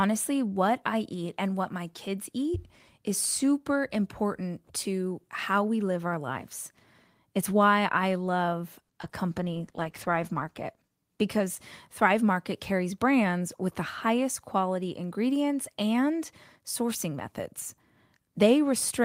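At 8.83 s a short stall from a late packet sets in and lasts until 8.91 s. A packet was not in the jitter buffer when its playout time came, so the buffer ran dry and the receiver extended the last sound for 60 ms until the packet turned up. Playback then resumed from the same point, leaving nothing lost but adding 60 ms of delay. Audibly, one sound is held unnaturally long, with a faint buzzy or dipping quality.

Immediately after, two short concealed packet losses follow, at 9.01 to 9.05 s and at 9.09 to 9.13 s. Each time, 20 ms of audio never reached the decoder, and the receiver synthesised a 20 ms stand-in by continuing the preceding sound, either from its pitch or as shaped noise, before crossfading back to real audio. Because they are so close together, the two gaps come across as a pair of quick smears or wobbles, and a brief consonant may drop out.

From 9.28 s to 12.19 s there is a call bitrate drop. 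The bandwidth estimate fell and the encoder was pushed from 32 kbps down to 13 kbps, staying at that floor for about 1.35 s. At that rate Opus quantises far more coarsely and narrows the audio band, so the speech turns rough, watery and muffled, with the upper frequencies missing. The sound recovers once the rate climbs back.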